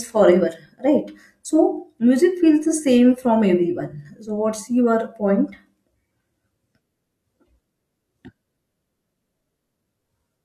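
No technical faults can be heard anywhere in this speech recording. There is nothing in the audio that needs a timestamp or further comment.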